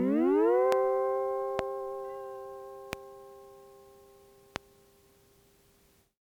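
A sudden voltage step, likely from a switch, plug or static discharge, was added to the signal four times, producing a loud pop at 0.72, 1.59, 2.93 and 4.56 s. Each single sharp click lasts about 0.02 s, peaks around 20 dB above the sound, and the sound carries on underneath.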